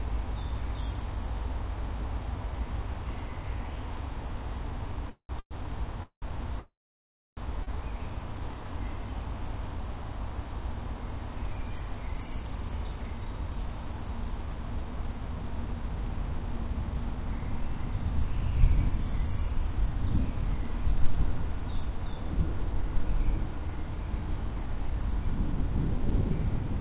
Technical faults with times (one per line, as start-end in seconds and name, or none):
5.09-5.53 call audio freeze
6.03-6.24 call audio freeze
6.60-7.39 call audio freeze
7.63-7.69 short stall from a late packet